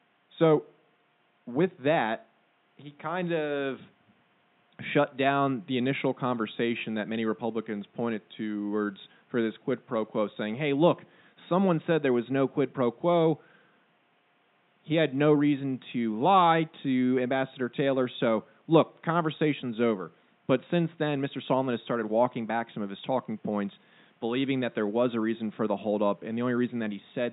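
Nothing stood out on listening to this speech recording, and the faint room background sits about 41 dB below the talking.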